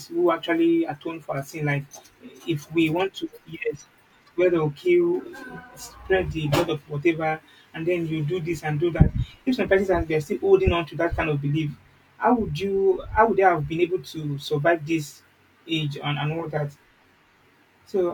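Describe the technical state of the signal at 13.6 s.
At 13.6 s the speech signal is intact, with no fault present at that moment.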